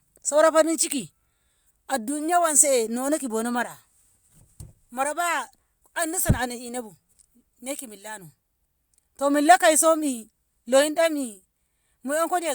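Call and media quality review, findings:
No call or media quality findings to report for this speech audio.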